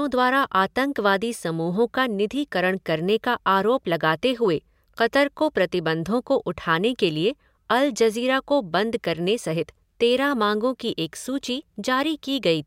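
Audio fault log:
Nothing to log for this speech recording, as no technical fault can be heard. Listening closely turns up no event at any point in the audio.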